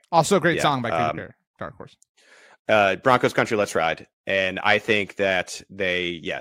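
No technical faults can be heard anywhere in the speech recording; the signal stays steady and intact throughout.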